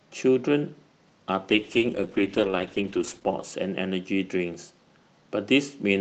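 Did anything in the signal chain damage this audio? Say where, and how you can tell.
Yes, a call bitrate drop at the network and codec stage. From 1.51 to 4.33 s the sound turns rough and muffled as Opus falls from 40 to 10 kbps, bottoming out for about 2 s. It recovers without gaps or clicks, unlike packet loss.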